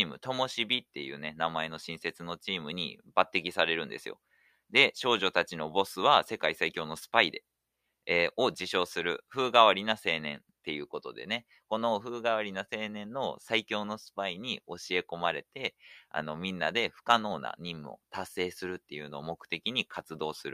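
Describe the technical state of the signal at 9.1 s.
At 9.1 s the signal is intact, with no audible fault at that moment.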